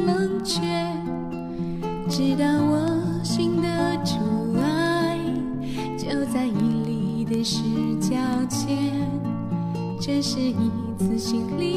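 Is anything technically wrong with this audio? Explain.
Yes. From 0.15 s to 11.55 s there are word clock ticks, about fifty sharp ticks of uneven strength roughly every 0.3 s. The receiving device's clock runs about 100 ppm off the sender's, so a sample slips at each wrap. Their strict regularity separates them from random digital clicks.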